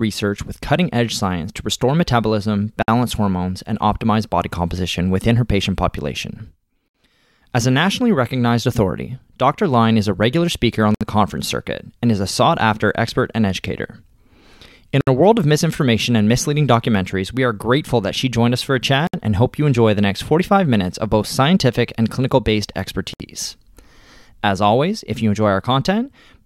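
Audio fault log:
2.83–2.88, 6.88–6.95, 10.95–11.01, 15.01–15.07, 19.07–19.14 and 23.14–23.20 s: gap at a join of encoded pieces. Every 4.0 s the speech drops out for about 56 ms (first) then 64 ms, because separately encoded segments were joined untrimmed, leaving encoder start delay and final-frame padding as silence. On a waveform, flat notches with abrupt, slightly smeared edges. On a spectrogram, narrow blank vertical bands, after which the speech resumes where it stopped.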